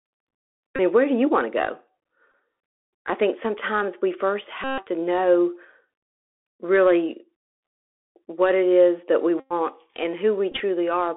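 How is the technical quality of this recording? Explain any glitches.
The recording is narrowband speech with plainly audible codec damage throughout, plus five brief buzzy interruptions.

Bluetooth CVSD headset codec, throughout the clip. CVSD sends one bit per sample at 64 kHz, each bit saying only whether the waveform steps up or down, with the step size adapting as it goes. Here the line band runs from about 300 Hz to 3.5 kHz, so the sound is thin and telephone-like. Loud high-frequency sounds outpace the step and distort, s sounds come out scratchy, and a granular hiss sits under the speech.

Bluetooth headset packet repeated, at 0.76 to 0.79 s, just before "mean where do you" (about 26 ms lost); at 2.32 to 2.34 s, just after "you want to go" (about 19 ms); at 4.64 to 4.85 s, between "think sometimes we first" and "to know" (about 139 ms); at 9.40 to 9.53 s (105 ms); and at 10.52 to 10.61 s, where 49 ms of losses are scattered over about 83 ms in short runs of roughly 10 ms at most. 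Voice packets between headset and phone went missing, and the chip decoded the previous packet's bits again in their place. Because each packet repeats every 3.75 ms, a run becomes a steady buzz near 267 Hz until good packets resume. This is most obvious in the long gaps at 4.64 s and 9.40 s, and it comes as brief buzzy flickers at 10.52 s.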